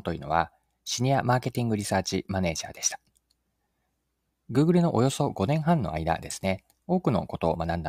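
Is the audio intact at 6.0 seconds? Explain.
Yes, at 6.0 seconds the speech plays through cleanly, with no dropout, click, distortion or other audible fault at that point.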